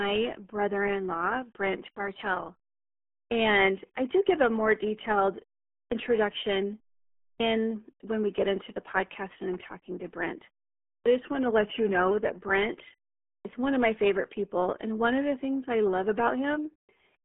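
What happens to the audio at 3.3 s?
A clipped start after a pause hits from 3.27 to 3.31 s. After about 0.74 s of silence, the output device has drifted into a low-power state and needs time to wake and lock again. The first 40 ms of the returning speech are lost, so it starts abruptly without its opening sounds.

The RealAudio 14.4 codec runs through this moment as it does across the whole clip. At 8 kbit/s, it passes roughly 250 Hz to 3.4 kHz with nothing above 3.8 kHz, leaving the resumed speech heavily muffled and gargly.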